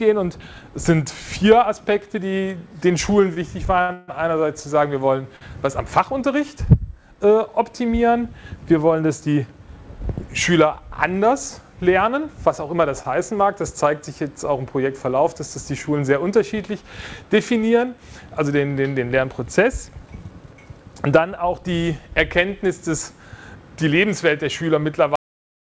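From 3.34 to 4.10 s the audio stutters with repeated stalls. Five times the jitter buffer ran dry and the receiver held the last sound. Together these fill 258 ms, about a third of that span, and the longest wait is 150 ms. On a spectrogram these show as smeared, repeated frames, and the waveform shows fading holds.

A short stall from a late packet follows at 5.36 to 5.43 s. One sound is stretched for 45 ms until the packet arrives. It looks like a brief, flat, sustained slice with a slight buzz or dip.

At 19.90 to 20.24 s a jitter buffer speed-up runs the audio at 111% to shed backlog. About 40 ms is trimmed in pitch-period pieces, so it sounds hurried but keeps the same pitch. A second speed-up at 23.55 to 24.78 s plays at 108% and removes about 100 ms. On the spectrogram the harmonic lines stay level while events crowd closer together.

The audio has a cut-off end at 25.16 s. It stops mid-sound, and the waveform drops straight to flat digital silence with no decay tail.

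Throughout, the spectrogram shows nothing above 8 kHz, which fits the G.722 wideband call path.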